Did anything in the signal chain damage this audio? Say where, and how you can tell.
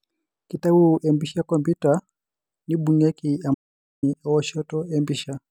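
Yes. From 3.54 s to 4.03 s the speech stops dead and the track drops into silence. There is no room tone, hiss or decay, and then the speech resumes abruptly, with just under half a second of material simply missing. That is an audio dropout to silence, most likely at the input stage: a device or link momentarily disconnected or muted while the recorder kept writing silence.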